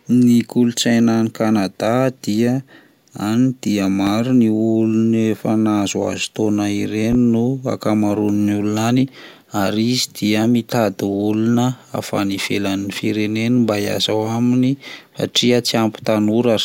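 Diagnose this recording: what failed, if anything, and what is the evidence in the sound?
Two loud pops sit on top of the speech, at 4.07 to 4.11 s and 7.13 to 7.16 s, peaking about 10 dB and about 5 dB above the signal, with speech continuing underneath. The likely cause is in the analogue wiring: a sudden voltage step from a connector, switch or static discharge, shaped by the following circuitry into a short thump.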